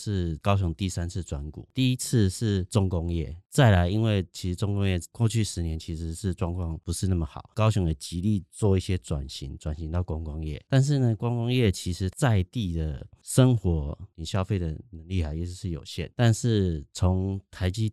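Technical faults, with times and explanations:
No technical faults detected.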